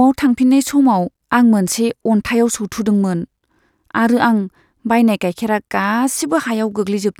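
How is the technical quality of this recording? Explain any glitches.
No glitches turn up anywhere in this recording, so there's nothing here that needs explaining.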